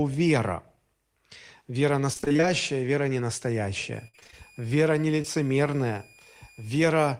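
From 2.13 to 2.44 s the speech turns choppy: repeated packet loss (robotic sound). A rapid run of dropouts, none longer than about 21 ms, left nearly half the span patched by extending the previous sound. That constant stutter is what sets it apart from a single concealed gap.

From 3.94 to 6.93 s a faint whistle sits around 2.43 to 2.46 kHz, roughly 30 dB below the speech. This is a switching supply whistle, from a power converter running in an audible burst mode or beating with another supply. Its slight pitch drift distinguishes it from a fixed mains hum.

Inside that stretch, 4.08 to 4.34 s brings a second burst of repeated packet loss. Here the longest hole reaches about 56 ms, and over half the span is concealed, so the robotic smearing is heavier.

At 5.22 to 5.26 s there is a short concealed packet loss. About 20 ms went missing and was bridged by continuing the last sound, leaving a single brief smear rather than a choppy run.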